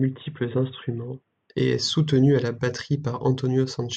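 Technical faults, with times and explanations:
0.0 to 1.5 s, input switched to a poorer device: the opening sounds dull and boxy, with nothing above 3.8 kHz, then clears up right at "et est soutenu à" with no gap or level jump. Likely a narrowband headset was active first, adding faint background noise of its own.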